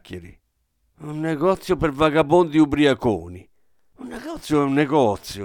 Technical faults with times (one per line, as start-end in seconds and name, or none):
none